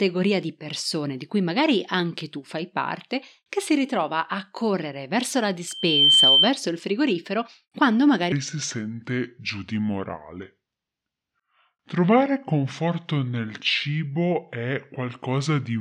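From 5.67 to 6.55 s, after "a correre verso la", a loudspeaker feedback squeal takes over. The microphone re-amplifies its own speaker output. A 3.1 kHz tone swells within half a second, about 10 dB above the speech.

From 8.32 s to the end, after "il frigorifero quando", a section plays at the wrong speed, 0.701 times normal. The speech turns slow and deep, roughly seven semitones lower. A clock mismatch is the likely cause.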